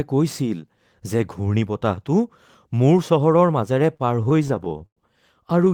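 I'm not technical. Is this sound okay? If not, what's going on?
No. From 3.75 to 4.99 s the speech keeps catching and dragging, with about fifteen tiny hitches where a sound is briefly held on. These are repeated stalls (stutter): the audio arrived late, so the player kept stretching what it had, never longer than about a tenth of a second.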